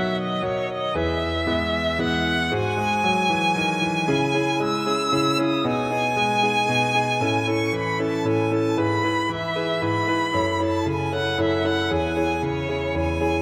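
Listening across the whole clip turns up no technical faults in the audio signal.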